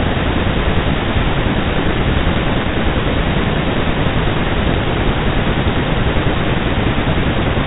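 A short patch of pops and rough, crackling bursts with brief jumps in level hits this speech recording from 4.69 to 4.78 s. These are bit errors on an ADPCM link, at a rate of a fraction of a percent. Each flipped bit knocks the decoder's step size and predictor off track, so the damage rings on for milliseconds.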